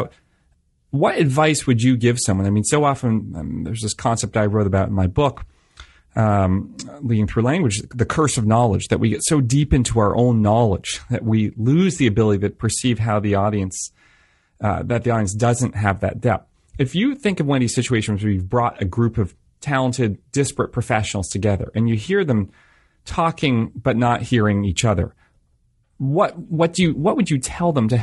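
Throughout the speech, the sound is rough and grainy, likely from low-delay AAC compression (AAC-ELD) at a rate fitting about 32 kbps, whose short frames resolve pitch harmonics poorly. A spectrogram shows smeared harmonic stripes with speckled noise filling the gaps between them.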